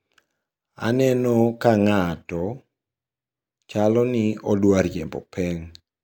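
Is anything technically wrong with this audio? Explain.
No, nothing is technically wrong.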